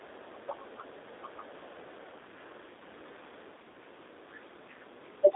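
Throughout the clip the speech is confined to a narrow telephone band, roughly 250 Hz to 3.7 kHz, with nothing above about 4 kHz, and it has a plainly audible rough, slightly synthetic edge. This is the G.729 codec (the G.729A variant) at work. The sound points to an 8 kbit/s stream. Instead of carrying the waveform, the codec rebuilds each 10 ms frame from a vocal tract filter, a pitch predictor and a few coded pulses, and that approximation causes the grainy texture.

From 0.02 to 1.89 s a faint second voice sits underneath the main speech, far quieter than it, roughly 35 dB down. This is the other side's voice leaking through, most likely playback from the talker's own loudspeaker that reached the microphone and that the echo canceller failed to fully remove before the signal was sent.

At the very end, from 5.23 s to the close, the speech briefly sags, dropping by as much as about 20 dB over roughly 70 ms in total. 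That quick dip fits speech suppressed in double talk. With both parties talking at once, the echo canceller apparently could not tell the local talker from the loudspeaker echo and turned the outgoing signal down, taking the wanted speech with it.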